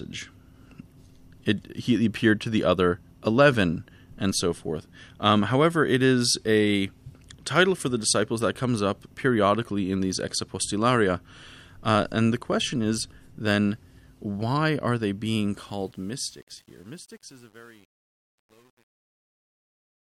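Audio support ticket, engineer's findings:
Truncation distortion on the fade-out, 15.54 to 20.04 s, right after "why are they being". It gets gritty from 16.24 s on. Probably an undithered fade or gain stage, with step size that points to about 9 bits.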